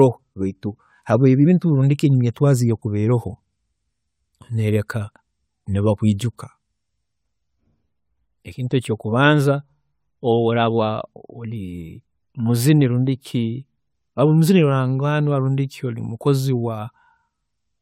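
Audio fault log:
No faults are audible anywhere in this speech.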